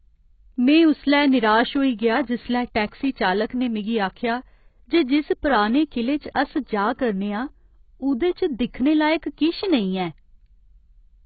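Heavy quantisation throughout, likely from AAC compression at a very low bitrate (the damage fits something near 16 kbps AAC-LC), strips everything above 4.6 kHz and starves the remaining bands. The speech sounds dull and muffled, with a smeared, warbling fizz on sibilants and sustained sounds.

From 2.87 to 2.92 s, pre-echo appears where a sharp onset landed late in a transform block. The coder spread that block's quantisation noise across the whole frame, so a short hiss runs about 50 ms ahead of the attack, which itself comes through softened and blurred.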